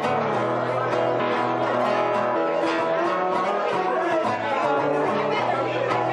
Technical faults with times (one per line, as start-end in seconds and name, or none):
1.19 damaged data in a compressed stream
2.35 damaged data in a compressed stream
4.23 damaged data in a compressed stream